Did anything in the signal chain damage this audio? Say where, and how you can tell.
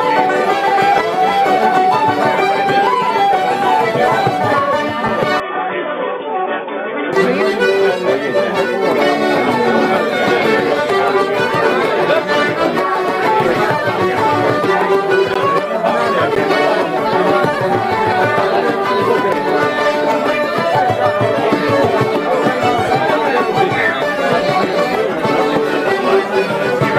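Yes. From 5.40 to 7.13 s the sound turns dull and boxy, with nothing above 3.6 kHz. The level drops by about 5 dB and a new noise floor appears, roughly 40 dB down. There is no gap at the change. This points to the capture stage, likely an input switched to a poorer device.

Two blocks of digital silence follow, at 15.34 s and 16.35 s. They last 15 ms and 10 ms. The audio cuts out hard and returns with no fade. That fits a driver or buffer stage that failed to fill its output in time.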